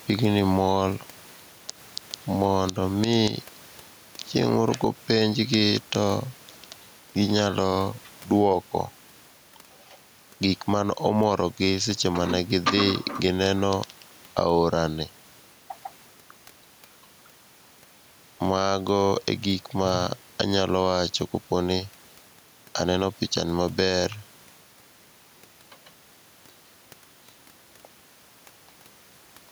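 Gain pumping runs through the whole recording. The level breathes, and the background is a room noise sitting about 34 dB below the speech. The swing is roughly 10 dB. The likely cause is an input gain set far too high, with a fast limiter or compressor clamping down on every loud syllable. That flattens the gap between loud and soft passages and leaves the speech sounding squashed.

An electrical switching spike lands at 4.68 s and another at 21.72 s. Each is a sharp snap or tight cluster of clicks sitting on top of the speech rather than part of it. It is over almost instantly, with no decay or room tail. The likely cause is a nearby switch, motor or static discharge arcing briefly, with the audio line picking up that burst of interference as a click.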